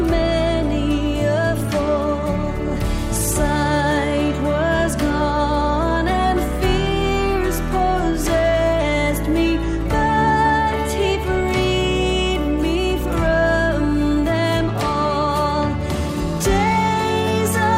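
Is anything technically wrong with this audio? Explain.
No, nothing technically wrong can be heard in this audio.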